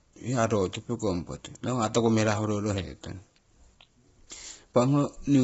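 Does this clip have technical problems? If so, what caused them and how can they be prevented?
Yes. Throughout the clip, the speech was likely passed through low-delay AAC compression, AAC-ELD as used in video calls, at a starved rate that fits about 16 kbps. The low bitrate leaves too few bits to code the spectrum, so the voice is heavily rough and grainy, with noise filling between harmonics and nothing above 7.7 kHz. Giving the call a higher bitrate or a connection with more bandwidth would prevent this.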